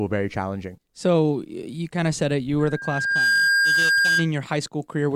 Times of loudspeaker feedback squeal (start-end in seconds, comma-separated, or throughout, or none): 2.59-4.31